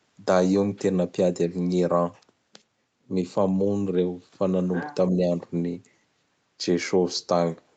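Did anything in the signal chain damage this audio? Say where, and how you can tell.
Yes. In the call processing, from 4.74 to 4.95 s, a faint second talker sits about 15 dB below: other side's voice leaking through, likely from echo the canceller left behind.

From 5.11 to 5.31 s the talker dips a few dB over roughly 150 ms: likely speech suppressed in double talk, a partial ducking rather than a dropout's hard silence.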